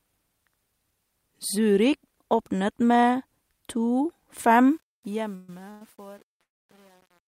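From 4.71 s the speech fades out, and the fade shows truncation distortion: an 8-bit stage without dither turns the quiet tail into gritty steps, worst after 5.04 s. Call audio freezes break in at 5.35 s (130 ms), 5.70 s (105 ms) and 6.41 s (280 ms, mostly 250 ms of silence). Each stretches the last sound, likely from jitter-buffer underrun, then resumes with nothing lost.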